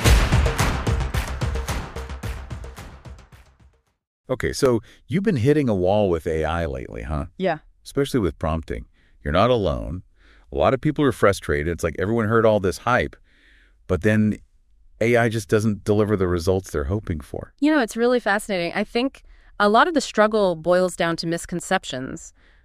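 CD scratch ticks mark this audio in two bursts: twelve ticks from 2.54 to 5.13 s and seven from 20.65 to 22.06 s, each a few milliseconds long, at about five per second. A surface blemish defeats error correction once per revolution, forcing interpolation or muting.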